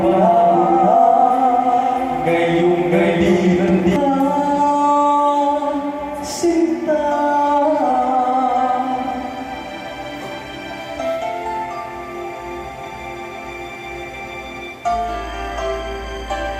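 From the very start until 3.96 s there's a doubled audio track: a second, equally loud copy trails roughly 0.7 s behind, likely from a slower capture path, then cuts off abruptly.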